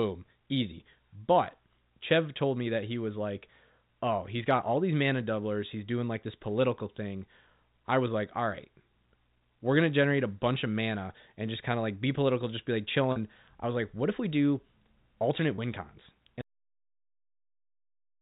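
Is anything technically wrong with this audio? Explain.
Yes, there are faults. Packet loss with pitch repetition occurs at 13.12 s, a 40 ms gap after "political just be like" and before "I was like what", and again at 15.56 s, a 20 ms gap after "if we do alternate" and before "win cons". Both sound like a briefly held, buzzy tone. The receiver bridges each missing stretch by repeating the last pitch period. On a spectrogram these show as short, perfectly regular harmonic smears.

A cut-off end occurs at 16.41 s, right after "do alternate win cons". The final buffers never reached playback, so the sound stops mid-stream with no decay. The waveform drops abruptly to flat digital silence through to the end.

The G.711 telephone coding itself carries through as expected, with nothing above 4 kHz on the spectrogram.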